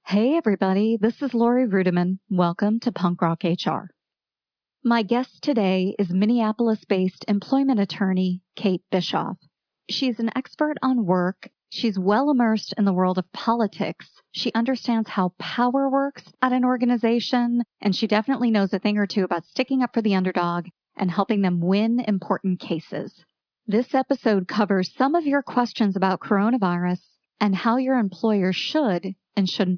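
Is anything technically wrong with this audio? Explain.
No, nothing is technically wrong with this audio.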